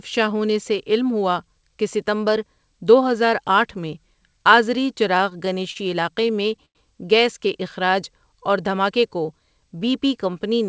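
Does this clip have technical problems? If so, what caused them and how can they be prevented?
Yes. Repeated stalls (stutter) from 5.18 to 6.77 s: the jitter buffer ran empty twelve times, and each wait of up to 94 ms was filled by stretching the last sound, which shows as smeared, repeated slices on a spectrogram. A larger adaptive jitter buffer on a steadier network would prevent it.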